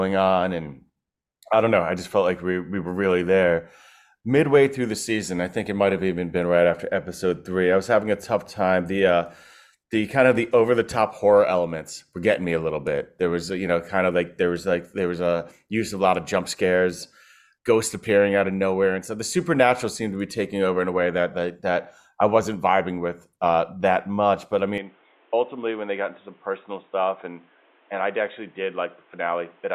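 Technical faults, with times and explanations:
24.78 to 29.74 s, input switched to a poorer device: the speech abruptly turns dull and boxy with no gap, nothing above 3.8 kHz, level down about 5 dB, and a new noise floor roughly 35 dB under the signal, likely from recording moving to a narrower-band microphone or headset profile.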